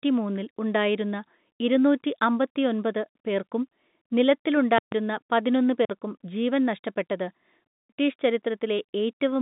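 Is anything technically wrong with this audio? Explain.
Yes. At 4.78 s the speech stops dead for about 140 ms, and at 5.85 s it stops again for about 46 ms, just before "ജീവൻ നഷ്ടപ്പെട്ടത്". Each dropout has a flat, frozen silence. This is an underrun with a held sample. The output buffer ran dry, and the converter held its last value instead of falling to zero. Live audio was lost during each gap, roughly 150 ms and 50 ms, so the speech jumps ahead on return. The second gap fits a 2048-sample buffer. The band-limited telephone sound of the G.711 line is a separate, normal trait.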